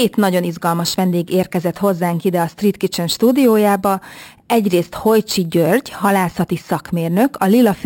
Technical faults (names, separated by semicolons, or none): imaging from sample-and-hold upsampling